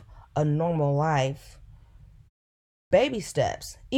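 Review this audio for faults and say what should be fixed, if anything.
A clipped start after a pause occurs at 2.61 s. After a 0.4 s silence the output device has gone idle and needs about 0.30 s to wake, so the speech onset is swallowed until 2.91 s. On a waveform the envelope jumps from flat to full amplitude with no natural rise. A spectrogram shows energy beginning as a hard vertical edge. Keeping the output stream active through pauses, for example by feeding it silent frames, would stop the device from sleeping and losing the start of the next phrase.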